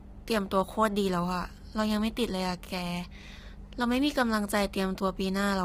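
Across the whole speech clip the voice is rough and grainy, with noise filling the gaps between harmonics and an artificial-sounding top band. This is heavy low-delay AAC compression, likely AAC-ELD near 24 kbps, whose short frames blur pitch structure rather than smearing transients like standard AAC.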